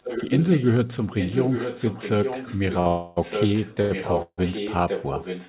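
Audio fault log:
0.0 to 0.7 s and 1.18 to 5.49 s, echo leak: a second copy of the speech trails the original by about 0.87 s, only about 5 dB quieter. This is likely a far-end loudspeaker leaking past an incomplete echo canceller. Unlike reverberation, it is a distinct delayed repeat, not a smooth decay.
2.80 to 2.88 s and 3.82 to 3.92 s, short stall from a late packet: the current sound is held for 56 ms and then 88 ms, with a slight buzz or dip, before continuing from the same point with nothing lost. The holds are brief, unlike the longer freezes.
2.88 to 3.19 s and 4.22 to 4.40 s, call audio freeze: the sound hangs and fades as a buzz or hiss for 288 ms, then for 153 ms ending in 50 ms of silence. This is likely delayed packets draining the jitter buffer. Playback resumes where it stopped, so a gap is inserted rather than sound removed.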